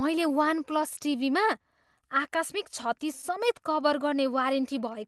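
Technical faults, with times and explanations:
Throughout: clock drift between sender and receiver. The sending side's clock runs slow, by roughly five percent. The receiver's buffer keeps draining, so it must stretch the audio to avoid running dry. This produces small, unevenly spaced timing hiccups across the whole clip.
0.18 to 4.93 s: repeated timing corrections. The receiver keeps inserting short repeated slices to stay in step, and playback runs at about 96% speed. Together they add roughly a fifth of a second. The result is a slightly dragging, unsteady tempo with faint stutters.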